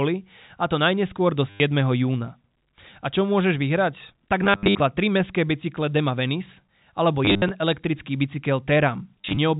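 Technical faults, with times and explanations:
1.5–1.6 s (after "a to najneskôr do"), 4.44–4.8 s (after "čo môžeš vyhrať"), 7.25–7.51 s, 9.21–9.37 s: packet loss with last packet repeated. Lost stretches of 100–240 ms, some in runs up to 60 ms, get patched by replaying the previous packet over the G.711 phone-band sound. That gives robotic stutters with a buzz that points to 10 ms packets, around 100 Hz.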